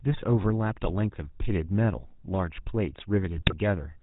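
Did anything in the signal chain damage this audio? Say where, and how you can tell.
Yes, at the codec stage. The whole clip has that buzzy, gravelly GSM full-rate codec roughness with nothing above 4 kHz, which fits a 13 kbps pulse-excited vocal-tract model.

On the network side, GSM bit errors hit from 3.36 to 3.54 s. The sound squawks and gargles as corrupted filter and gain values throw those frames off, which points to a weak radio link.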